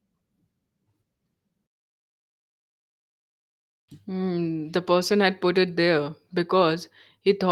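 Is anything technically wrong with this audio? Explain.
No, nothing technically wrong stands out here.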